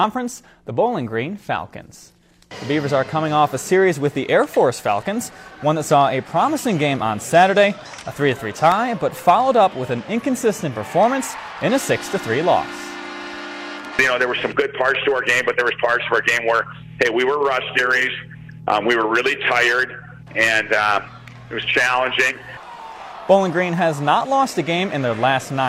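From about 8.21 s to 10.22 s there's a run of periodic USB or driver dropouts, a handful of ticks spaced exactly half a second apart. Something was stalling the bus or the audio driver on a fixed schedule, and each stall cost around half a millisecond of signal, which got filled with silence. Those brief holes in the waveform are what you hear as the clean, evenly timed clicks.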